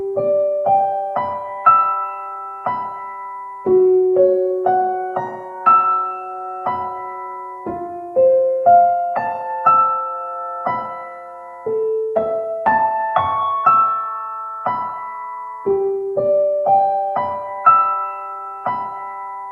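No faults here: the sound came through a WebRTC call path on Opus at 40 kbps, and the marks of it are the codec's usual coding noise and the top end rolling off above 12 kHz, which is the codec's normal band limit.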